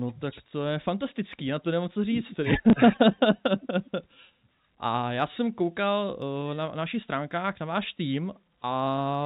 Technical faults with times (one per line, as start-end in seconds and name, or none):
2.70-2.73 packet loss with last packet repeated